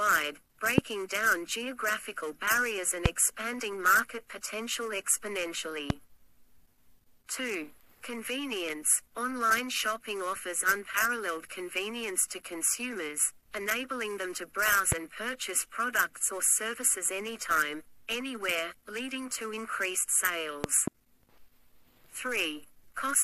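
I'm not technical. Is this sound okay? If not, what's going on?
No. Something in the playback or recording chain, most likely a connector, switch, static discharge or a glitch in the audio hardware, sent sudden jolts of voltage into the signal. Each one is heard as a loud pop, a sharp click or thump much louder than the surrounding sound, which carries on underneath. Single pops land at about 0.78, 3.06, 5.90 and 14.92 seconds, and two pops come in quick succession between 20.64 and 20.90 seconds.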